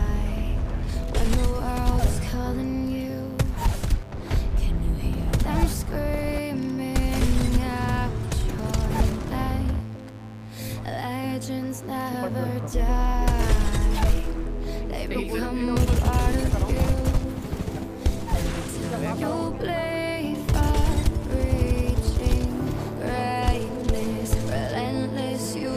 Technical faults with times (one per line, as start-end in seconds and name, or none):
0.00-25.77 mains buzz